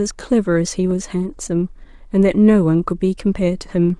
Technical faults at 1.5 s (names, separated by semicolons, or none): clock drift buffer slips